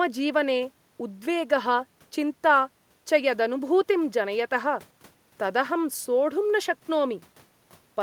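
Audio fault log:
No technical faults can be heard anywhere in this speech recording; the signal holds steady and intact throughout.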